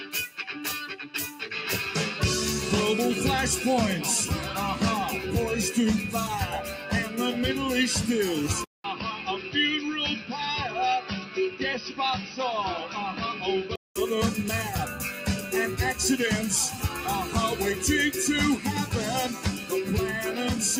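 A noise suppressor applied to music or sounds stays active throughout, pumping held parts and tails by around 5 dB. Unlike a gate or compressor, it tracks steadiness rather than loudness, so attacks pass while sustained material sinks. The sound is cut by the noise suppressor most deeply at 0.06–0.42 s (about 8 dB), 6.67–7.16 s (about 5 dB), 8.84–9.55 s (about 7 dB), 11.01–11.61 s (about 8 dB), 11.81–11.99 s (about 8 dB), 12.21–12.39 s (about 7 dB), 16.73–16.98 s (about 5 dB) and 19.33–19.72 s (about 7 dB). From 8.64 to 13.96 s the audio turns dull and boxy, with a new noise floor roughly 45 dB down, no real level change, and a 200 ms silence at the switch. The silence and the new hiss mark this apart from an EQ change, and the likely cause is the input switched to a poorer device.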